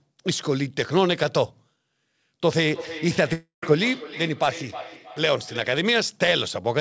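From 2.74 s to 5.85 s, a feedback echo between two devices sets in: a second device in the room replays the call and its microphone sends it back. Each stretch of speech returns roughly every 0.3 s, thinner and ringing, peaking about 14 dB below the speech.

Between 3.33 s and 3.63 s, a long network dropout is the likely cause of a 0.3 s hole. The receiver stretches the last sound into a fading buzz, leaving about 0.13 s of near silence before the speech resumes with that stretch missing, heard over audio band-limited at 8 kHz.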